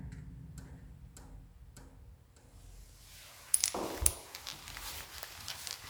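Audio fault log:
No fault can be heard anywhere in the audio. Nothing in it calls for a time, a value or an entry of its own.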